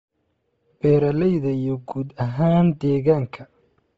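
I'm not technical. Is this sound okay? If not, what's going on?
No. Throughout, the speech has a breathy, grainy edge and nothing above 7.7 kHz. Unlike plain muffling, the top sounds hissy, likely from Bluetooth LC3 compression.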